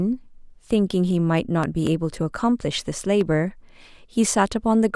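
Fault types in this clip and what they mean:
Loud pop: a sudden voltage pulse added onto the speech, likely from a plug, switch or static discharge. A double pop spans 1.64 to 1.89 s, peaking roughly 10 dB above the speech. A single, weaker pop follows at 3.21 to 3.23 s, about 5 dB above.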